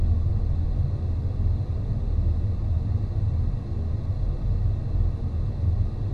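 An everyday-sound recording with nothing technically wrong anywhere in it. No fault of any kind can be heard at any point, so there are no times or causes to report.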